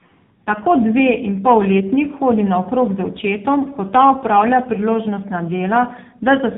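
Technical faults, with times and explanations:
Throughout, tandem speech coding: the speech sounds rough, muffled and warbly, with nothing above 3.7 kHz. The call passed through CVSD, then G.711 A-law, then AMR-NB at 6.7 kbit/s. Each stage decoded and re-encoded the previous stage's degraded output, so the errors compounded.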